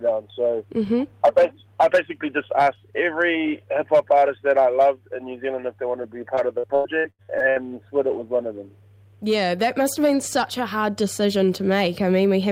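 From 6.35 to 7.58 s there is repeated packet loss (robotic sound): a rapid run of dropouts, the longest 96 ms, each patched by extending the preceding sound. About a third of that stretch is concealed, leaving choppy audio with pieces missing.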